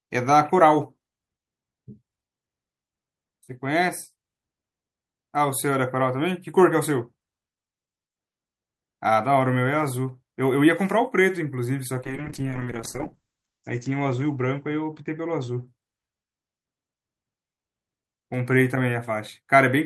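From 12.06 s to 16.21 s a call bitrate drop hits the speech: the encoder, starved of bits, codes coarsely and narrows the bandwidth from 20 kHz to 8 kHz, so the speech turns muffled and rough. The worst 1.3 s suggests roughly 8 kbps, down from about 64 kbps.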